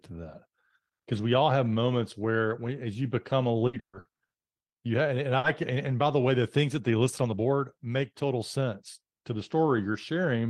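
Repeated packet loss, a robotic sound, runs from 3.67 to 4.76 s. Six gaps were patched by extending earlier sound, 460 ms filled and 300 ms lost, leaving choppy speech.

Jitter buffer slow-down follows from 4.87 to 5.30 s. Repeated pitch periods add 44 ms, so speech plays at 92% speed, drawn out at unchanged pitch.

A short stall from a late packet at 5.38 to 5.47 s, just before "can and by the", holds the last sound 60 ms while the buffer sits empty, with nothing lost.

Jitter buffer speed-up spans 7.22 to 7.87 s, between "things that they listed" and "total sense to the". Trimming roughly a tenth of a second of pitch periods makes speech run at 112%, sounding hurried.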